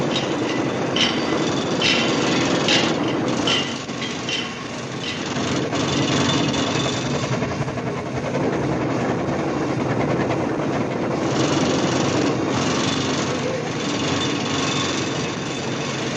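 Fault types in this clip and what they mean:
Damaged data in a compressed stream: corrupted frames make the decoder misread data and lose sync, giving brief blips in the sound at 4.60 s and 7.62–7.64 s.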